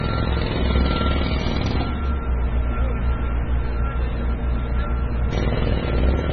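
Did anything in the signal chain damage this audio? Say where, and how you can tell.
Yes. MP3 compression throughout, likely at the codec stage: nothing above 6.5 kHz and heavy watery swirling, consistent with a starved bitrate near 16 kbps.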